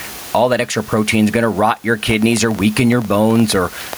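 Gain pumping runs through the whole speech clip. The level swings by roughly 15 dB. The room noise sits about 31 dB below the speech. This is likely a fast limiter catching a gain set too high. Everything sounds squashed.

From 2.11 s to 3.94 s a train of clicks plays over the speech and the pauses. There are around fifteen similar ticks, about 7.7 per second, at an uneven pace. They peak about 5 dB above the speech. Interference or a faulty connection is the likely source.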